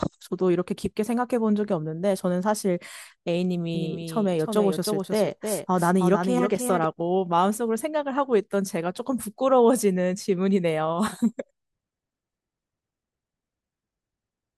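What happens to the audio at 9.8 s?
Nothing goes wrong at 9.8 s; the audio is intact there.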